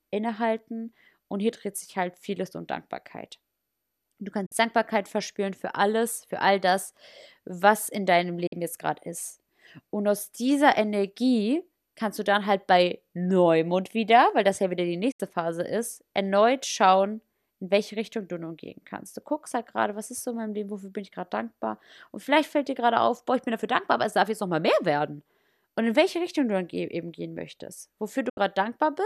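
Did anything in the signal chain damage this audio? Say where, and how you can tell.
Yes. It is a digital broadcast dropout at the reception stage. The speech mutes at 4.46, 8.47 (after "das was in deinem"), 15.11 (after "das ja wieder die") and 28.29 s, for 48 to 72 ms, with quick 8 ms fades. The receiver muted corrupt frames. That fits two or three lost frames each time.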